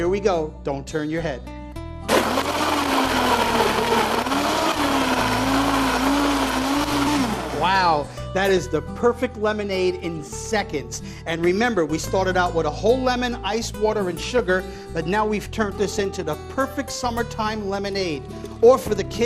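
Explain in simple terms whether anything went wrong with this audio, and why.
The whole recording sounds dull and grainy, with a gurgle under the sound and the top end missing. This is the mark of MP2 compression, most likely from a digital radio broadcast squeezed into too little data. The encoder splits the sound into narrow frequency bands and drops the upper ones when it runs short, then stores what remains only roughly, so the damage is plainly audible from start to finish.

There are also four short bursts of DAB burbling: at 8.49–8.58 s, 12.46–12.58 s, 14.31–14.50 s and 15.90–16.04 s. Each lasts roughly a tenth to a fifth of a second and adds short blips of noise over the sound. It happens when reception weakens and corrupted data slips past the error correction, putting short blips of noise into individual frequency bands.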